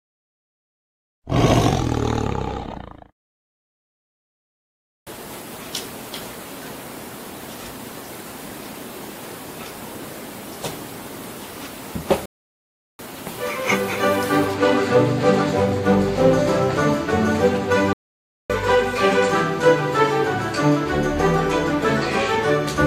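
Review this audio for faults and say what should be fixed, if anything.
Two playback stalls: the sound halts mid-flow from 12.26 to 12.99 s (0.73 s) and from 17.93 to 18.50 s (0.57 s), likely because the player starved or its thread blocked. Unlike a brief dropout, these silences last over half a second. Deeper buffering and a non-blocking audio thread would prevent them.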